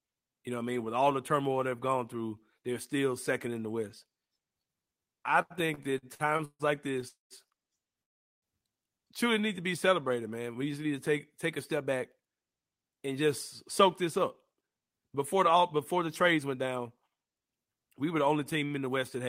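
The clip is speech, and it runs into network timing trouble in the middle. From 5.59 to 7.05 s there are repeated stalls, a stutter. The audio halts ten times. Each gap is bridged by stretching the last sound, 348 ms in all, the longest gap 145 ms. About a quarter of that span is filled this way. Nothing is lost, but the speech drags and jerks. Packets were arriving late or too slowly, so the jitter buffer kept running dry.

Two call audio freezes follow. The first runs from 7.08 to 7.33 s and lasts 221 ms. The held sound fades to silence for 160 ms of it. The second runs from 8.03 to 8.45 s and lasts 394 ms. Almost all of it, 390 ms, is silent. The speech then resumes where it stopped, with nothing missing, only pushed later. The likely cause is packets held up in transit, which emptied the buffer.

Next come two jitter buffer speed-ups. Right after "to take take a", from 11.77 to 13.27 s, the speech plays at 112% speed. 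From 14.01 to 16.75 s it plays at 107%. The pitch stays the same, but the talking sounds hurried. Each stretch sheds roughly a fifth of a second. The receiver is cutting out tiny pitch-period slices to drain the extra audio held in its buffer.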